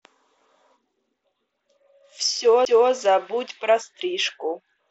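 At 2.65 s the speech gives a small tick and a near-instant dropout of roughly 10 ms, then resumes from a different point, so the sound jumps rather than continuing where it left off. This is a CD skip: a knock or a surface flaw threw the laser onto a neighbouring turn of the disc's spiral, the player muted briefly, and playback picked up a whole number of disc revolutions away. The mSBC headset path keeps everything below 8 kHz with a faint grain on louder passages.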